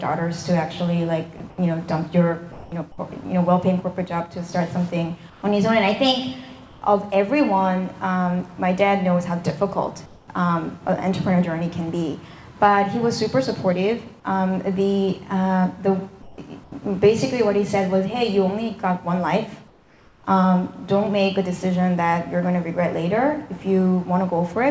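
At 1.38–1.40 s the sound is clipped by about 10 ms, giving way to steady noise: sound dropped by the voice detector, likely because it mistook quiet sound for background. From 1.38 to 1.58 s, and again at 2.52–2.72, 5.30–5.42, 6.66–6.82, 10.06–10.28, 16.22–16.72 and 19.68–20.24 s, the background turns into a smoother, different-toned hiss. Where its level shifts, it is about 2 to 6 dB quieter. This is comfort noise in place of the background, likely filling pauses in discontinuous transmission. Throughout, nothing is heard above 8 kHz, which fits a 64 kbps G.722 call path.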